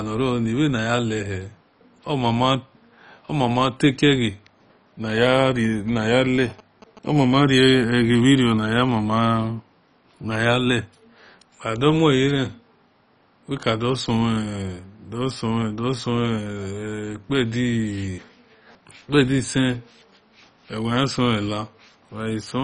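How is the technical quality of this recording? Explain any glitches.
The recording has two technical faults: heavy codec damage throughout and a short burst of radio interference.

Throughout, the speech sounds dull and gurgling, with nothing above 10.4 kHz. This is likely MP2 compression at a low rate near 32 kbps, which switches off upper sub-bands and coarsely quantises the rest.

From 5.41 to 7.08 s, GSM signalling bursts produce a galloping dit-dit-dit of short 217 Hz buzzes, well below the speech. A nearby phone's radio bursts are rectified by the audio circuit.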